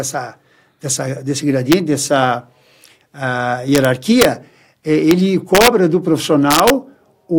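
Speech with integer overflow: loud peaks pass the largest value the integer format can hold and wrap to the opposite extreme instead of being held at the limit. Violent cracks occur at 1.72 s, 3.75 to 3.85 s, 4.22 to 4.25 s, 5.11 s, 5.55 to 5.68 s and 6.51 to 6.70 s, with peaks pushed up to about 2 dB past full scale. Clipping would flatten those peaks. Here each one flips across the full range, giving a much sharper snap.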